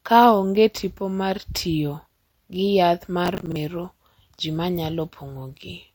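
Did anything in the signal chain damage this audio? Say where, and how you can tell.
Yes. Processor overload crackle at the driver or buffer stage, from 3.26 to 3.56 s, just after "gi yath ma". Around ten missed buffers, each replaced by a hard-edged repeat of stale audio, turn into a gritty burst and then stop cleanly. A single dropout would leave one gap, not a dense cluster.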